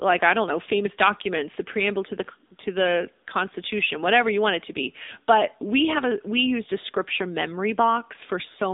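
Throughout, the speech carries AMR narrowband mobile codec damage. The band is confined to roughly 250 Hz to 3.7 kHz, with nothing above 3.7 kHz. The pulse-driven vocal-tract model sounds plainly buzzy and synthetic, which fits a middle AMR-NB mode near 8 kbps.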